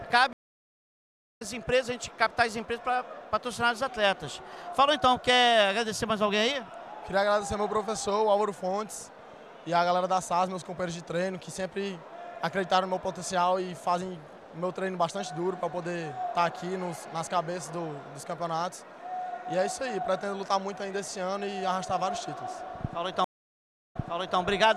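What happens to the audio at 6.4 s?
Nothing goes wrong at 6.4 s; the audio plays through that moment intact, with no dropout, click, glitch or other audible fault.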